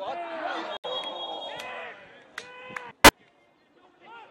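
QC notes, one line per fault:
0.77–0.86 s, corrupt frame muted: The sound drops abruptly into dead silence for about 88 ms, then picks up again with no shift in timing. The gap is the length of about three compressed frames. Their bits were damaged, so the decoder rejected them, and the player filled their slots with silence instead of guessing at the content. That is why the hole has hard edges rather than a fade, and why everything after it stays in step.
3.04–3.10 s, corrupt frame decoded: A short, harsh burst of noisy, chirp-like energy cuts across the sound for about 66 ms, peaking at about −10 dBFS. Here the damaged frames, around three of them, were accepted and played. Flipped bits in their gain values and spectral codes put energy at frequencies and levels that do not belong to the sound. The error lasts only as long as the bad frames, giving a brief foreign blip.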